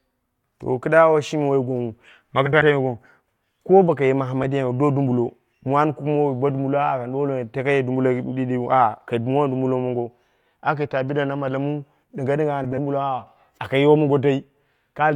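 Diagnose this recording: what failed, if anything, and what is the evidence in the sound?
Speech, with three short frames-out-of-order events at the network or packet-delivery stage feeding the decoder: 2.46 to 2.62 s, a brief one at 4.43 s, and 12.64 to 12.78 s. Each is a garbled flutter. Two adjacent blocks of frames were decoded in swapped order, so each stretch plays with its halves exchanged. The half-lengths, about 85, 8 and 39 ms, point to three- or four-frame runs. No time is lost.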